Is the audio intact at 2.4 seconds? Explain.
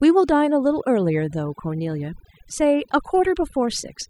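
No. At 2.4 seconds the speech sits over a near-silent background flecked with twinkling specks, as it does throughout. This is overdone noise removal: an aggressive reduction stage drops individual frequency bands near its noise estimate, taking quieter parts of the voice with them.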